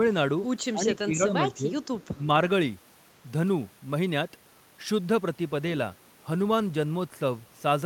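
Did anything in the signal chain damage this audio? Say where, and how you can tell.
Yes. At 0.73 to 1.34 s, 1.54 to 1.73 s and 2.14 to 2.28 s the speech dips by about 10 dB in patches, which points to speech suppressed in double talk at the call-processing stage. The likely cause is an echo canceller that couldn't tell the near talker from the far end's loudspeaker signal and ducked both. On a waveform the envelope sags in short notches. A spectrogram shows the energy thinning across the band in those windows.

From 2.01 to 2.07 s there is a brief echo leak, also from call processing: a faint copy of the speech returns about 246 ms late, roughly 35 dB below the direct sound. This is likely residual loudspeaker pickup that the far end's echo canceller didn't fully remove and sent back. On a spectrogram it appears as a weak, smeared repeat of earlier harmonic structure, offset by a quarter second, too low to show clearly on the waveform.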